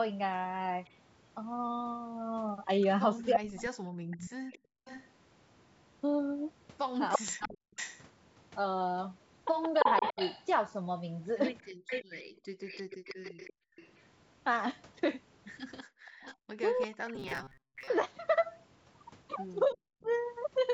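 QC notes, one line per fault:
0.85–20.17 s, echo leak: a delayed copy of the speech trails the original by about 340 ms, sitting roughly 10 dB below it, for nearly the whole clip. The likely cause is a loudspeaker on the far side whose echo canceller let part of its microphone pickup through and sent it back. Unlike a room reverb tail, this is a distinct repeat at a fixed lag, not a smooth decay.
3.33–12.56 s and 15.85–20.10 s, speech suppressed in double talk: while both sides talk at once, the talker's speech dips by as much as about 40 dB in short pieces, adding up to roughly one and a half seconds in the first stretch and about one second in the second. Likely the echo canceller could not separate this talker from the loudspeaker echo and turned both down. The drops hit the speech itself, not only the room sound.
11.74–13.76 s, background gated by the echo canceller: the room sound between phrases drops by about 40 dB for brief moments, roughly 0.4 s in total, then returns. 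The canceller clamped the microphone hard while the loudspeaker played and released it afterward. This differs from double-talk suppression because the background floor vanishes and comes back abruptly, rather than the talker's speech being cut.
17.15–17.88 s, robotic sound from repeated short buffers: the speech turns into a rigid metallic buzz at 133 Hz that still roughly follows the speech, with about half the audio being repeats. Likely new audio arrived too seldom and the last slice was replayed to fill the gaps, which fits a buffer of about 7.5 ms. The fixed buzz pitch, unrelated to the talker's own pitch, sets it apart from ordinary codec roughness.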